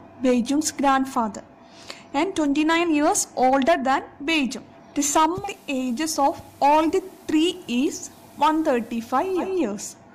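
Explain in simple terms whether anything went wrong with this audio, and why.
Something did go wrong, at about 5.33 seconds. The radio loses its digital signal and slides over to the ordinary FM broadcast of the same station, which is called digital radio blending to analogue. The switch takes only about 160 ms, and the loudness stays the same, but a faint background hiss creeps in and stays until about 9.51 seconds, when the radio blends back to the clean digital signal.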